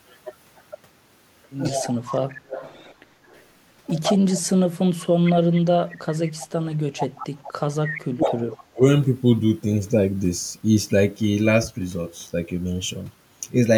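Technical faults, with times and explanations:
1.69–1.94 s, 4.55–5.17 s and 7.44–8.81 s, speech suppressed in double talk: the voice dips while a second talker is active, by about 10 dB at first, about 25 dB in the middle stretch and by roughly 40 dB in the last, where about a second of sound is pushed down in pieces. An echo canceller likely mistook the overlap for echo and attenuated everything. A spectrogram shows energy, especially upper harmonics, fading out in patches, and the waveform envelope pinches in.
1.74–3.43 s, 4.02–5.33 s, 5.89–7.52 s and 8.24–8.33 s, echo leak: a delayed copy of the voice trails it by 154 ms, about 15 dB below the direct sound in the first and third stretches and only about 5 dB below in the second and last. This is likely loudspeaker pickup that the far end's canceller failed to remove. The spectrogram shows ghost harmonic traces shifted 154 ms right of the originals, and the waveform shows smeared tails after each burst.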